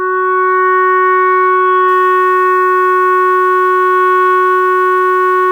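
From 1.88 s to the end, the music has likely been requantised to about 7 bits by plain rounding, with no dither to break up the error. That is low bit depth without dither: the rounding error tracks the waveform instead of behaving like steady hiss, sitting only around 35 dB below the music. Quiet passages and decaying tails turn grainy and buzzy, and the distortion shifts its character as the music changes.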